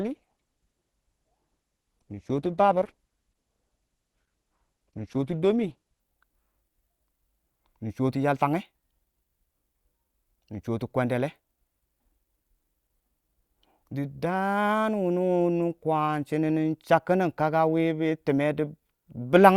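From the start to 6.0 s the speech comes from an adaptive stream starting at a low bitrate: the player began on a cheap version to get going fast, then switched up once it had gauged the connection. Until 6.0 s the treble is thin and smeared, with watery codec artefacts, which fits a low-rate Opus stream near 12 kbit/s. On a spectrogram the upper band is empty or blotchy, then fills out abruptly at 6.0 s, with no gap in the waveform.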